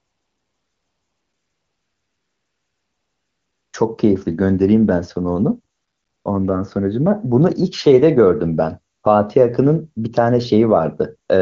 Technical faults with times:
0.00-3.73 AMR comfort noise
5.75-6.25 AMR comfort noise
8.93-9.03 AMR comfort noise

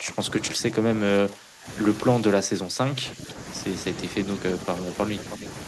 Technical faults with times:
0.00-1.67 speech suppressed in double talk
2.22-3.37 speech suppressed in double talk
5.30-5.37 echo leak

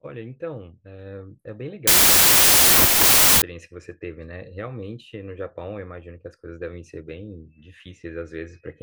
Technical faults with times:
1.87-3.42 wrong sample width

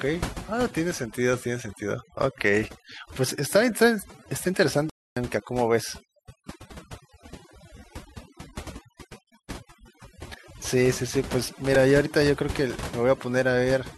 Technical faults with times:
0.00-13.97 overdone noise removal
4.90-5.17 playback stall
6.71 repeated buffer
11.75 repeated buffer

